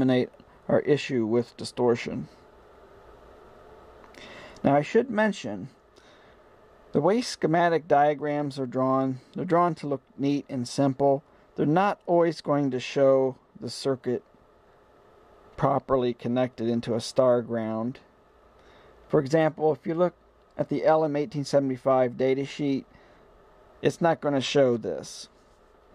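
Nothing technically wrong can be heard in this audio. There are no faults to point to at any moment in the clip.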